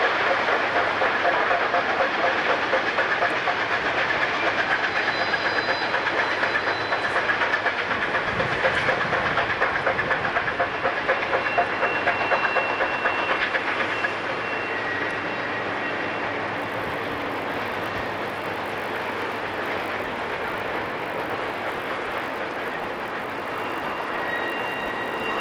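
From 16.56 s to the end at 25.41 s, the resampler restarts on every block. The conversion runs from 24 kHz to 48 kHz, one 20 ms block at a time. Each block is treated as if nothing came before or after it. So every block edge carries a small error. Those errors repeat at 50 per second. At that rate they merge into a buzz at 50 Hz, heard only while sound is present.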